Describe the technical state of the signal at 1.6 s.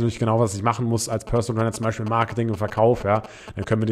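GSM signalling bursts run from 1.12 to 3.73 s, covering 1.6 s. A nearby 2G phone sending short groups of radio bursts is rectified by the audio circuit, giving a galloping dit-dit-dit of brief 217 Hz buzzes around 10 dB below the speech.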